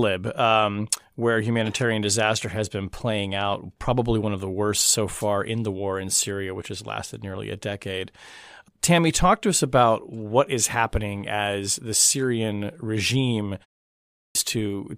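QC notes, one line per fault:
13.93–14.35 s, clipped start after a pause: after a pause of only 0.36 s, the output path dropped into a sleep state and needed time to wake and lock again before passing audio. During that wake-up, 421 ms of the returning speech was discarded, so the phrase bursts out of silence already underway, missing its opening sounds and with no natural onset. The ordinary muting of the background in pauses doesn't cut into the speech.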